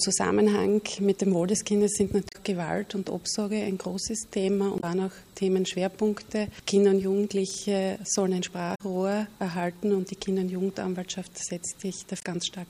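Damaged data in a compressed stream appears four times: 2.29 to 2.36 s, 4.77 to 4.84 s, 8.74 to 8.81 s, and 12.19 to 12.24 s. Each lasts roughly 50 to 70 ms. At these points the encoded bytes are corrupt, so the decoder misreads or rejects the affected frames and loses sync until it locks onto the next valid frame header. Each break is heard as a brief chirp, squawk, click or short hole cutting into the sound.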